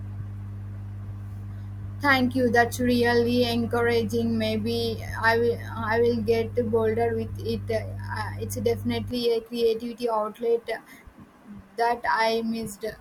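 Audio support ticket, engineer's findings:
Ground loop or nearby transformer coupling the 50 Hz power line into the signal path. Result: mains hum, a steady low 50 Hz tone with low harmonics, fairly loud against the speech, from 0.0 s to 9.11 s, stopping just before "a creativity".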